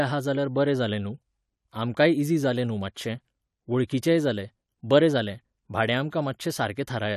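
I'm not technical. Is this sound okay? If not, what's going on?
No, there is one flaw. At about 3.87 to 3.89 seconds, just before a sharp sound in the speech, you can hear a brief hiss, and the sharp sound itself comes out blurred rather than crisp. This is called pre-echo. The audio was squeezed by a compression method that handles sound in small chunks, and the noise meant to hide under the loud moment leaked into the quiet instant just before it, about 21 milliseconds early.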